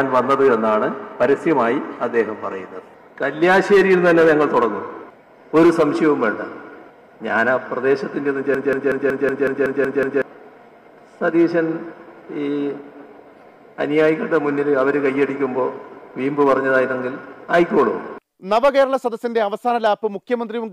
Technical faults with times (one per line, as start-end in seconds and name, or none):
8.54-10.22 system hang loop